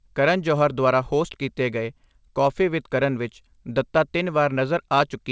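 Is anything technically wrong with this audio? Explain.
No, nothing in this speech clip points to a technical fault. It has the sound of a wideband call path: there is nothing above 8 kHz, which fits a G.722 codec at 64 kbps, and the codec adds only its usual coding noise.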